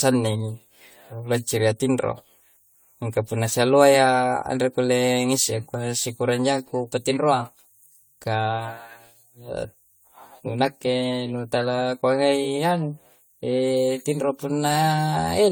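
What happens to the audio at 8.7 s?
At 8.7 s the speech carries generation loss, present across the whole clip, likely from around ten lossy re-encodes on shifting frame grids, which fits AAC at about 96 kbit/s. It sounds swirly, hollow and smeared, with blurred onsets. A spectrogram shows patchy holes and speckle below 20 kHz, and the waveform's transients look softened.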